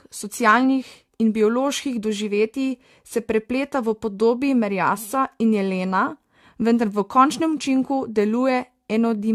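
From start to finish the speech carries generation loss: a swirly, hollow smear, with consonant onsets blurred and a watery warble on sustained sounds, heavier than a single pass at a moderate bitrate would leave. The likely cause is the audio being re-encoded about three times through a lossy AAC-style codec near 64 kbit/s, each pass adding fresh quantisation noise. A spectrogram shows scattered holes between harmonics, smeared transients and an empty band above 18.7 kHz.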